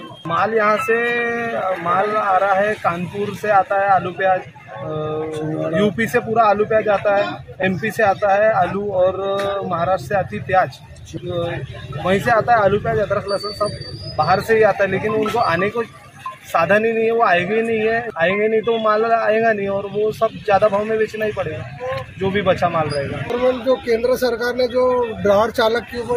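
No technical faults can be heard anywhere in the audio, and the signal stays steady and intact for its whole duration.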